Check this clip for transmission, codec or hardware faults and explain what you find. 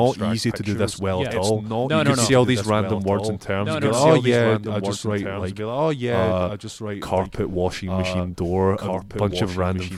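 A doubled audio track runs through the whole clip. The speech is heard a second time about two seconds later, a little quieter, perhaps 5 dB down. This is likely a second capture path or a misaligned edit. Unlike room echo or reverb, this single full-band repeat has no decay tail and no added room colour.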